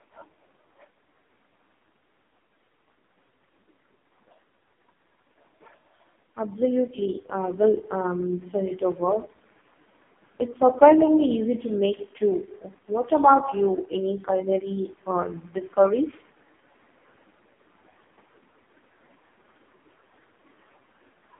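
From start to finish the speech carries the sound of an AMR narrowband mobile codec, and the heavy damage fits its lowest 4.75 kbps mode. So few bits leave the vocal-tract model with very sparse pulse excitation, so voiced sounds turn buzzy and synthetic. On a spectrogram, energy sits in a 250 Hz to 3.6 kHz band with a hard ceiling near 3.8 kHz, and harmonics look smeared and blocky in 20 ms steps.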